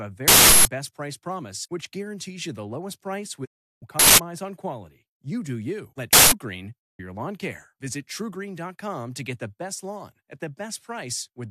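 At 0.28 to 0.65 s an uninitialised buffer was played before audio filled it, so stale memory comes out as a loud 0.37 s burst of digital noise, which fits a 16384-sample block. From 3.44 to 3.84 s a digital broadcast dropout mutes the receiver on lost frames, fading out within 20 ms and leaving a silent hole of about 0.36 s. Further uninitialised-buffer bursts, each 0.19 s and consistent with 8192-sample blocks, hit at 3.99 and 6.13 s. A second dropout silences 6.80 to 7.01 s.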